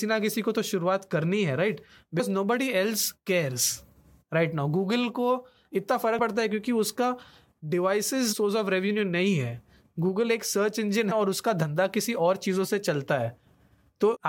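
Damaged data in the compressed stream causes brief glitches at 2.18, 6.18, 8.32 to 8.34, 11.10 and 14.14 to 14.17 s. Corrupt frames throw the decoder off sync.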